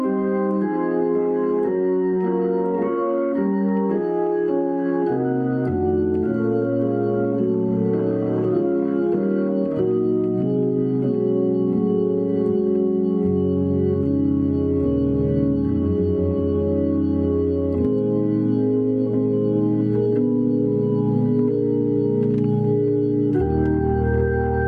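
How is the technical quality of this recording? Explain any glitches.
No technical faults are audible anywhere in the recording, so there are no glitches to explain.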